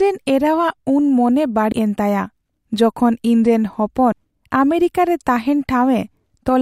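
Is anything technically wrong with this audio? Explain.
Yes. At 1.72 s, just before "ᱮᱱ ᱛᱟᱭᱟ ᱡᱚᱠᱷᱚᱱ ᱤᱧᱨᱮᱱ", and 4.12 s, just after it, audio is missing between chunks. About a tenth of a second of speech skips, likely lost while 2.5-second chunks were swapped. Unlike a dropout, the edges butt together with no silent gap.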